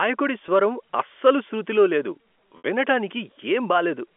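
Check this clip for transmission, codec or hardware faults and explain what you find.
Two brief dropouts are audible, both packet loss with pitch repetition, carried over a G.711 telephone path with a 250 Hz to 3.4 kHz band.

At 0.46 to 0.48 s, just before "అస్సలు శృతిలో లేదు", and again at 2.58 to 2.64 s, just after "అస్సలు శృతిలో లేదు", the receiver filled missing audio by looping the last pitch period. The first gap fits one 20 ms packet and sounds like a slightly held, buzzy note. The second, about 60 ms and pointing to three packets, fades to silence before speech cross-fades back. A spectrogram shows frozen harmonics there. The waveform shows identical repeated cycles shrinking toward zero.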